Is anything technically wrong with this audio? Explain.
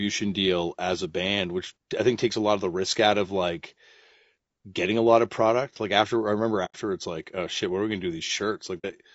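Yes. The speech sounds rough and grainy throughout, with noise between the harmonics, most likely low-delay AAC compression (AAC-ELD) at a bitrate around 32 kbps. At 6.65–6.76 s and 8.78–8.85 s there's AAC frame loss with muting: the decoder zeroed the missing frames, leaving soft-edged holes about 90 ms and 60 ms long.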